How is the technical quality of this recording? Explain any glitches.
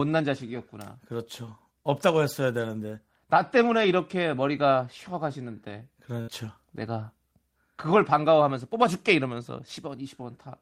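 The recording is marred by network packet loss in three places, with one short dropout where material is missing.

Lost packets rebuilt from error correction occur at 0.57 to 0.59 s, across 3.57 to 3.91 s, and at 6.30 to 6.32 s. Each missing packet was replaced by the low-bitrate copy carried in the following packet, so nothing drops out. Those stretches sound briefly rougher and noisier. The middle one points to several scattered losses totalling about 180 ms.

A burst of packet loss runs from 6.21 to 6.30 s. The receiver stretched the last received sound over roughly 60 ms, fading it so it comes across as a held buzz or dying hiss. Speech then resumes with about 60 ms of content skipped.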